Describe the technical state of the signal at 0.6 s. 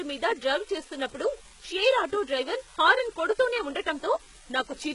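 At 0.6 s the speech carries a steady crackle from an unreliable data bit: one marginal bit flips at random, adding equal-sized spikes that persist through pauses. The whole clip is also gritty, with nothing above about 11.1 kHz, likely from heavy HE-AAC compression at a rate that fits 12 kbps, whose replicated treble sounds metallic and lispy.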